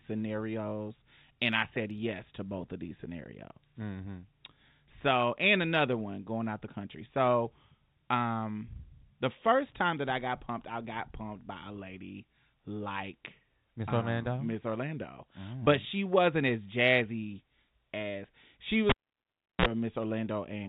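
A sharp pop at 18.89 s is followed by near silence for about 0.71 s, then a short burst of 60 Hz hum lasting roughly 41 ms, and a second pop as the speech returns at 19.66 s. This is a cable pulled and plugged in while live: the signal breaks, and during reinsertion only the plug tip makes contact, picking up mains buzz before the connection seats fully. The telephone-band G.711 character of the speech is audible around the dropout.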